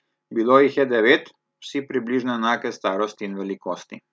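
Listening to this speech recording, nothing stood out as a technical problem at any point.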